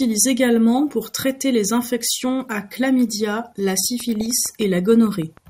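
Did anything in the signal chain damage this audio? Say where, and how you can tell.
Yes. Throughout, the speech sounds dull and gurgling, with grainy, flickering upper frequencies. This is MP2 compression, likely at the codec stage, where too few bits force upper sub-bands off and coarsely quantise the rest. The plainly audible damage fits a rate around 80 kbps.

From 3.85 to 5.38 s a train of clicks ticks at a steady 6.6 per second, about ten pulses peaking roughly at the level of the speech itself. The even spacing and much the same shape likely come from interference or a struggling interface in the analogue wiring or converter.

Between 4.21 and 4.39 s there are brief blips of noise in single sub-bands. This is DAB burbling from reception, where bit errors, around a tenth of a percent, slipped past error correction into what sounds like about six frames of MP2 data.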